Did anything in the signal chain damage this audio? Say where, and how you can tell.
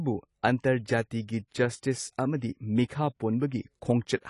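Yes, at the codec stage: the speech was likely passed through AAC compression at a low bitrate, consistent with 32 kbps AAC-LC. Throughout the clip nothing remains above 11.4 kHz, and coarse quantisation leaves plainly audible damage, with sibilants dull and smeared.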